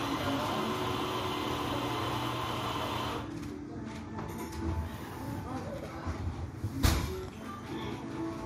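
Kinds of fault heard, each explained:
No kinds of fault are heard in this audio, so there is nothing to explain.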